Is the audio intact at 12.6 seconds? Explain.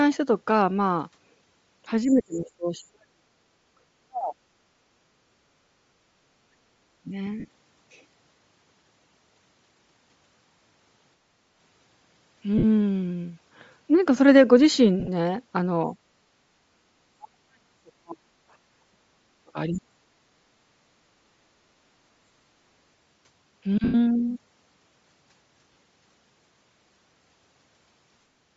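No. From 12.58 to 12.64 s there is a dropout of lost LE Audio frames, a gap of about 50 ms, which fits five missing 10 ms frames. The decoder fills the gap by repeating the last good spectrum with random signs on each component. The sound therefore turns into a short, noisy smear instead of going silent.

The same moment also carries plainly audible codec damage. The upper spectrum sounds thin and noise-filled, with a breathy, grainy edge on the speech. This points to low-bitrate coding at roughly 32 kbps in 10 ms frames. The likely cause is Bluetooth LC3 compression, which discards much of the high band and replaces it with synthetic noise. That damage runs through the whole clip, so the dropout at 12.6 s sits on top of it.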